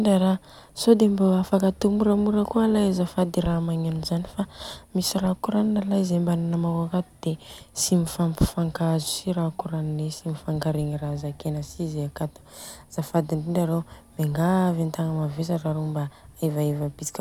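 No technical faults can be heard anywhere in this speech recording. Nothing in the signal path draws attention to itself at any point in the clip.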